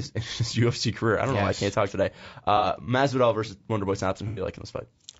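Throughout the speech, the sound is rough and grainy, with a hiss-like fill between the harmonics and a top band that sounds thin and somewhat synthetic. This is likely low-delay AAC compression, AAC-ELD, whose short frames give the encoder too little frequency detail to hold the pitch harmonics cleanly. The damage is plainly audible and fits a bitrate of around 32 kbps.

At 2.57 to 2.66 s the speech smears into a brief noisy, phasey patch. This is AAC frame loss with concealment. About 60 ms of audio was missing, consistent with two lost frames, and the decoder covered it by extending the last good spectrum with scrambled detail. A longer patch of the same kind follows at 4.28 to 4.42 s, where about 90 ms was lost, consistent with three frames.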